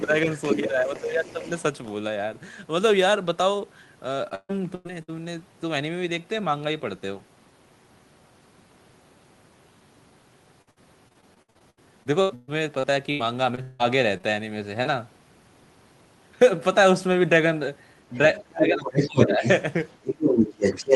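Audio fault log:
0.00–1.91 s, other side's voice leaking through: The echo canceller likely failed to remove all of the far end's loudspeaker sound from the microphone. A second voice therefore sits underneath the talker, about 15 dB quieter, giving a faint background of overlapping speech.
0.04–1.47 s, speech suppressed in double talk: With both sides talking at once, the echo canceller likely could not tell the talker from the echo and turned both down. The talker's voice dips by up to about 10 dB, for around 0.7 s in total.
4.29–5.10 s, repeated packet loss (robotic sound): Packets kept arriving too late or not at all. Four holes, together about 0.32 s and the longest 0.14 s, were patched by extending the previous sound, covering 38% of the stretch. The result is choppy speech with pieces missing.
10.62–13.81 s, repeated packet loss (robotic sound): A longer run of losses left 17 holes totalling about 0.9 s, the longest 0.18 s. 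Each was filled by continuing the last sound, covering 29% of the span, so the speech turns robotic and broken with pieces missing.
14.17–14.25 s and 14.83–14.87 s, short concealed packet loss: About 20 ms of audio failed to reach the decoder on three occasions, two of them back to back. Each gap was filled by continuing the previous sound and then blended back in, which leaves a brief smear or wobble.
18.13–20.95 s, other side's voice leaking through: Far-end sound from the loudspeaker likely got past the echo canceller again, this time at about the same level as the talker. The result is a prominent, competing second voice that runs to the end.
18.43–19.44 s and 20.02–20.95 s, speech suppressed in double talk: During the overlapping talk, the canceller likely pulled the talker down along with the echo. The voice drops by up to about 20 dB in the first stretch and about 15 dB in the second.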